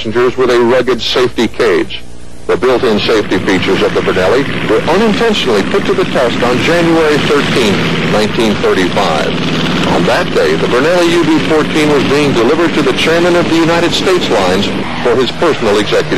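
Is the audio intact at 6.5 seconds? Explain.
Yes, the audio is intact at 6.5 seconds, with no dropout, click, distortion or other fault audible at that point.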